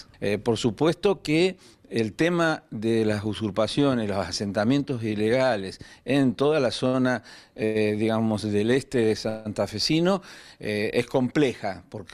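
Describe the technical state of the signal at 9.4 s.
At 9.4 s you're in the middle of a call audio freeze that runs from about 9.29 to 9.47 s. The last bit of sound gets stretched into a fading buzzy hiss for around 164 ms, with no drop to silence. Packets were likely held up in transit and the jitter buffer ran dry, so the receiver padded the gap. When they arrived, playback picked up right where it stopped. Nothing's missing, but everything after is about 164 ms late.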